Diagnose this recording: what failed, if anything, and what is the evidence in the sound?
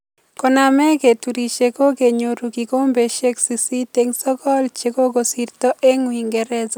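Nothing stood out on listening to this speech recording that would point to a failure at any stage of the chain.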